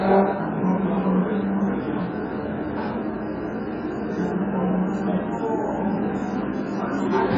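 Throughout the audio, nothing sounds above 7.5 kHz, and what remains warbles and fizzes with gappy, smeared detail. This is likely heavy AAC compression, pointing to a very low bitrate near 12 kbps. A simple low-pass filter would dull the sound cleanly, without that swirling texture.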